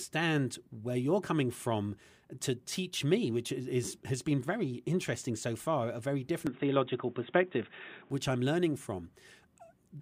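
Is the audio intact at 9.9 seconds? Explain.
Yes, the audio is intact at 9.9 seconds, with no fault to be heard at that moment.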